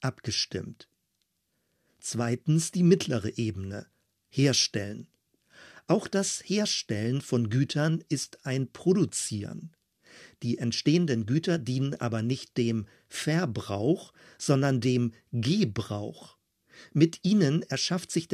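No technical faults can be heard anywhere in the recording; the signal stays continuous and steady throughout.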